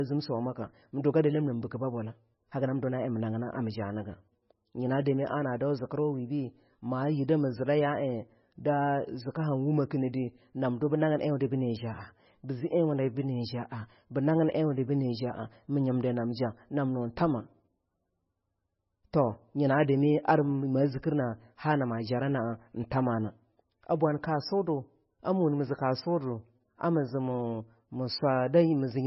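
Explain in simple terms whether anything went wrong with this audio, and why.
MP3 compression damage runs through the whole clip. The speech has nothing above 5.6 kHz, so s sounds lose their hiss, and it sounds watery and swirly. Likely a heavily squeezed MP3: short of data, the encoder drops the treble and lets faint detail flicker.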